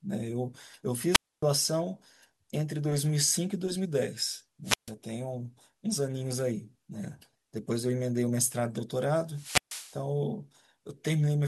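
Wireless microphone squelch dropouts occur at 1.10–1.44 s, 4.64–4.93 s and 9.27–10.03 s. The radio signal fades, hiss rises, then the receiver mutes for 267, 143 and 137 ms.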